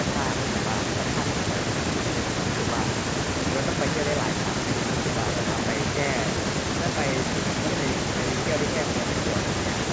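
No technical faults are audible.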